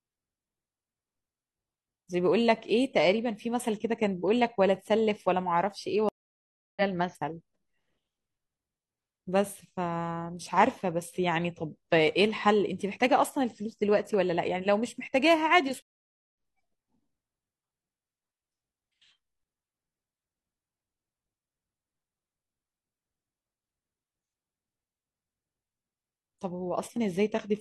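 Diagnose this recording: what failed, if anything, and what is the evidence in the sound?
Network stage: two stream reconnects. The speech drops out from 6.09 to 6.82 s (about 0.68 s of silence) and again from 15.82 to 16.35 s (about 0.53 s). Each time it picks up roughly half a second later, skipping content, as a fresh decoder restarts mid-stream.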